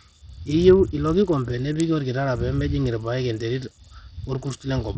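From start to finish the speech carries heavy Bluetooth SBC compression damage, with the likely cause being a starved SBC link at a low bit pool, consistent with roughly 64 kbps. SBC splits the signal into a handful of wide sub-bands and shares out bits without a hearing model, so the upper bands lose out first. The treble drops away and flickers in and out, and a gritty, grainy noise with aliasing rides on the voice.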